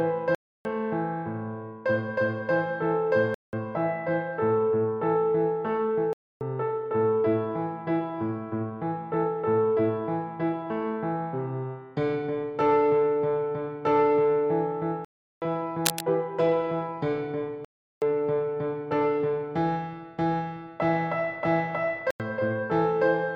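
Blocks of digital silence cut in at 0.35 to 0.65, 3.34 to 3.53, 6.13 to 6.41, 15.05 to 15.42, 17.65 to 18.02 and 22.11 to 22.20 s. These are most likely unfilled output buffers, heard as dead holes from about 90 to 370 ms. At 15.85 to 16.01 s, cable scratch noise adds dense rustling roughly as loud as the sound, likely from a worn contact. This is added noise rather than a gap.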